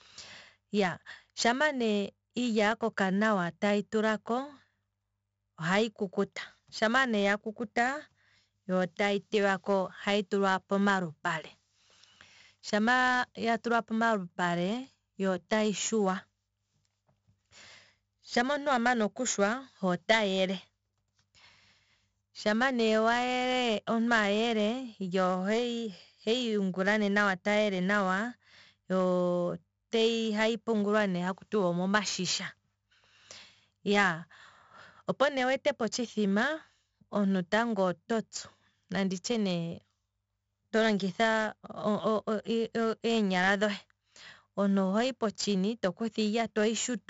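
From start to finish the speech carries the marks of 4-bit ADPCM compression, and the damage is heavy. Each sample is coded as a coarse 4-bit step from a predicted value, so the quantisation error rides on the signal as a gritty hiss that swells with every loud syllable, and sharp onsets distort where the step size lags behind. Nothing reaches above 7.7 kHz, which dulls the top end and points to a 64 kbps stream at a 16 kHz sample rate.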